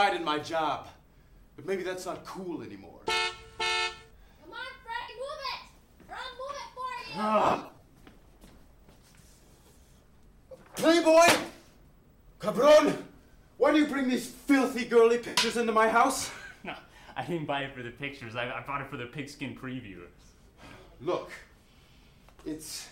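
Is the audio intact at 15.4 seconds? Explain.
No, not quite. There's a stretch of lost LE Audio frames from 15.27 to 15.38 s, ending just before that point. The LC3 decoder fills the roughly 0.1 s gap, about a dozen frames' worth, by repeating the last spectrum with scrambled signs and fading it, so the sound smears into noise before recovering.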